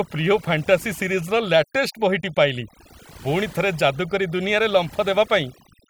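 Throughout the clip, overdone noise removal strips out frequency bands near the noise floor along with quieter speech detail, leaving near-silent gaps with twinkling specks.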